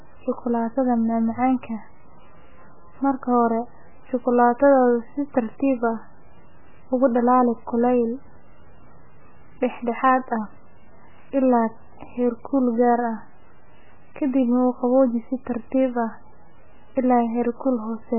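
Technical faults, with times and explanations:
Throughout, MP3 compression: the speech is band-limited, with nothing above 3 kHz, and carries a heavy watery, swirling texture, the likely result of MP3 encoding at a very low bitrate, consistent with about 8 kbps. With so few bits available, the encoder discards the treble above a fixed cut-off and zeroes weaker frequency lines, which flicker on and off between frames. That produces the dull, muffled top end, the warbling artefacts, and the blurred consonant onsets.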